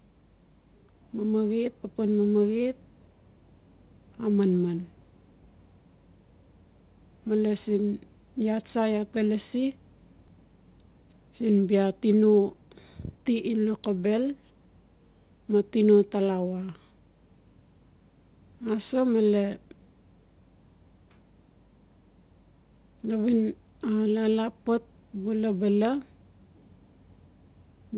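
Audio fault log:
10.28 s, skip ahead: The speech jumps forward at this point, with about 0.4 s of audio gone and the two sides joined almost directly, with no silence or fill in between. This points to buffered audio being thrown away, probably by an overfull jitter buffer catching up all at once. Unlike a dropout or packet-loss gap, nothing is muted or smeared. The sound simply resumes further on, so the listener notices missing material rather than a hole.
12.14 to 13.78 s, jitter buffer speed-up: Over this stretch the speech runs at about 111% of its normal rate, hurried but at the same pitch, through the narrowband G.711 call sound with nothing above 4 kHz. The buffer was holding too much audio and trimmed many short pitch-period pieces in a row, roughly 0.2 s in total. Unlike a skip ahead, no single jump is heard.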